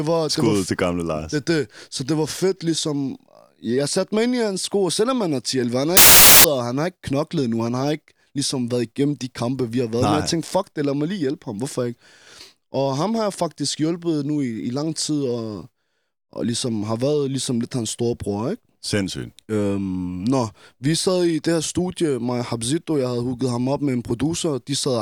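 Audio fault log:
5.97–6.44 s, samples built from the wrong bytes: after "han har", the reader assembles each sample's bytes out of order or misaligned, so the fast-changing low bits become the large part of every value. The speech is replaced by loud, harsh broadband noise for about half a second, until "og han har ikke".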